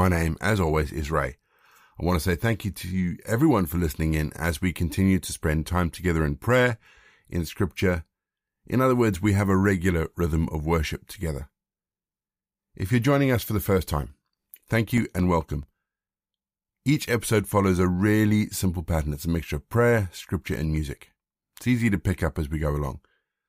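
From 13.88 to 16.07 s, eleven CD scratch ticks recur about five times a second. A scratch defeats error correction once per disc rotation, so the player briefly mutes or interpolates, each gap lasting a few milliseconds. Eight more follow from 20.54 to 22.08 s.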